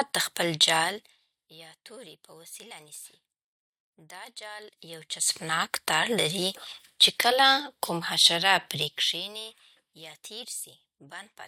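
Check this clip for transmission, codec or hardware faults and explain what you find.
The clip has one kind of fault, zipper noise, occurring twice. From 4.6 to 5.6 s, just before "تار لري", the level rises about 20 dB. From 8.76 to 9.48 s, between "کله کوم حشره" and "یا تېر", it falls about 20 dB. Each change moves in unsmoothed 1 dB jumps, roughly 30 per second, so every jump clicks and a fast ticking rides over the speech until the level settles.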